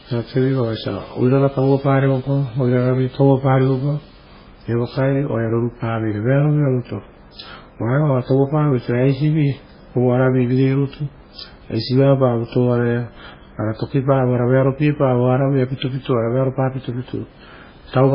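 Throughout, the speech sounds watery and swirly, with nothing above 5.2 kHz. A spectrogram shows a hard ceiling and flickering holes. The likely cause is heavy, low-bitrate MP3 compression.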